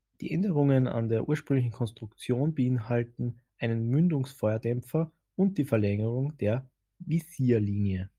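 No technical faults are audible anywhere in the recording.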